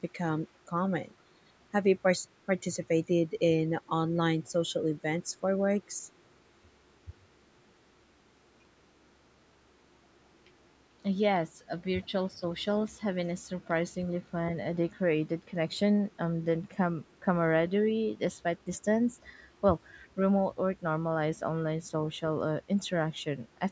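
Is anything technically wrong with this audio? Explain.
Yes. The speech is repeatedly pushed down during overlaps, the room sound dips once, and a faint echo slips through near the end.

Speech suppressed in double talk, at 1.71–2.48, 7.05–7.27, 11.85–12.27, 13.12–13.21, 17.18–17.24 and 18.29–18.44 s: the talker's speech dips by anything from a few decibels to near-silence. This is likely because the echo canceller mistook overlapping talk for echo. Unlike gating, the voice itself drops, not just the background.

Background gated by the echo canceller, 10.03–10.17 s: the room sound sinks by about 9 dB while the far-end loudspeaker plays, then recovers. It is a brief hole in the ambience rather than in the speech.

Echo leak, 20.02–20.08 s: a faint, very low copy of the voice returns about 344 ms late. This is likely residual loudspeaker pickup the canceller failed to remove. It adds sound rather than removing any.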